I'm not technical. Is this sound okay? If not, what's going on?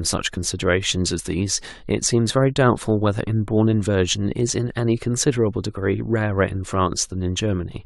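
No. At 0.36 s there are compressed frames skipped: a tiny slice of the speech, about 20 milliseconds, never plays because that part of the file was missing or damaged. You hear the speech jump ahead at that point rather than a silent gap.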